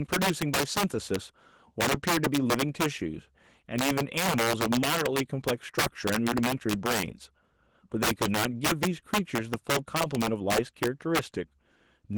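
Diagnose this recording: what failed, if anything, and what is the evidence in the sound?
Integer overflow in sample-format conversion: gain about 8 dB too high wraps the loudest speech peaks to the opposite sign, producing violent cracks on a few percent of samples throughout.

Opus voice compression at the codec stage: hybrid coding at a rate that fits about 16 kbps leaves the speech plainly hoarse and slightly robotic, though content extends to about 20.2 kHz.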